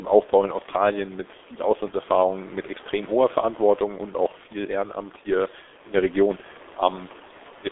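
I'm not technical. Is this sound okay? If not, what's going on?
No. From start to finish the speech passes through the G.723.1 codec, an old internet-phone compressor. It keeps only about 300 Hz to 3.6 kHz and rebuilds the voice in coarse chunks, so it sounds muffled and hoarse, with smeared consonants. A simple muffled phone line would sound dull but stay clean; here the voice itself is rough.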